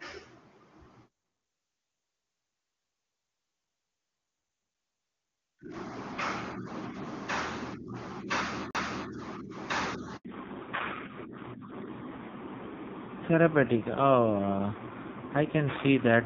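A speech recording with two CD skips, at 4.74 s and from 8.71 to 8.75 s: each is a tick and brief mute of roughly 5 ms and 40 ms where the laser jumped tracks, seen as a waveform discontinuity where the sound resumes elsewhere. A handover gap from 10.17 to 10.25 s silences everything for 80 ms as the call switched networks, a flat waveform and blank spectrogram column. From 10.25 s to the end, a fallback to narrowband removes everything above 4 kHz, leaving a hard ceiling on the spectrogram, with the dull, rough grain of a low-rate codec around 5.9 kbit/s replacing the clear HD Voice (AMR wideband) sound of the earlier part.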